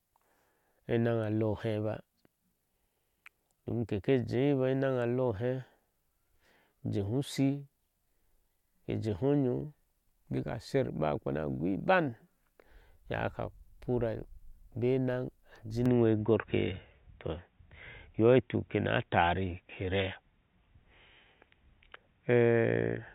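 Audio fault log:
15.86–23.15 s, input switched to a poorer device: at 15.86 s, with no gap, the speech loses everything above 3.8 kHz, shifts modestly in level and gains a faint new noise floor, likely another input device; a simple filter would not alter level and noise together.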